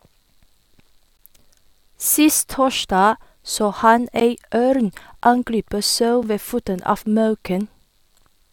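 At 1.17 s, 4.2 s, 5.21 s and 6.23 s the speech drops into short holes of digital silence with hard edges, lasting about 17, 14, 11 and 7 ms. This is a gap between stream segments: the time stamps of adjacent 1-second segments fail to meet, so playback inserts silence at the joins, adding time without losing audio. The last three holes fall almost exactly one second apart, matching the segment length.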